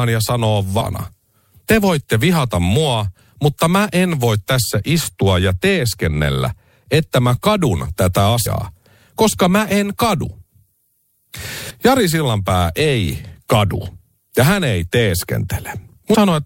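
Compressed frames were skipped four times, each time jumping the speech forward by whole frames of roughly 26 ms, leaving a short smeared blip: at 0.80 s after "ja sanoo" (about a third of a second lost), at 8.45 s after "että mä kadun tätä", at 11.69 s, and at 16.13 s (briefest gap).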